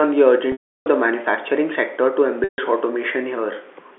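At 0.52 s the speech is cut by packet loss with pitch repetition lasting 340 ms, until 0.86 s. The receiver bridges the gap by replaying the last pitch period, so a brief held buzz is heard, fading out over about 50 ms and leaving silence before the speech cross-fades back in. A second loss from 2.44 to 2.58 s (140 ms) sounds the same. Both durations fit 20 ms packets, and the narrow telephone band of the G.711 line is audible throughout.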